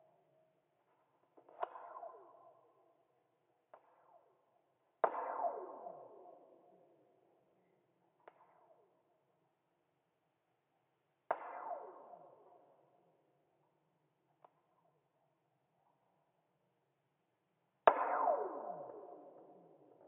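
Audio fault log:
Nothing to log here; I listened all the way and didn't catch a single fault in this recording.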